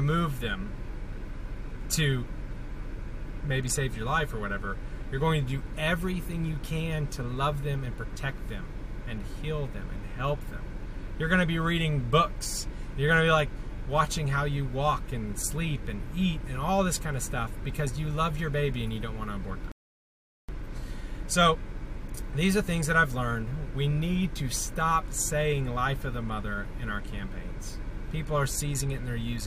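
At 19.72 s a rebuffering stall runs the player dry, adding 0.77 s of silence: a flat waveform gap and blank spectrogram column, then seamless resumption.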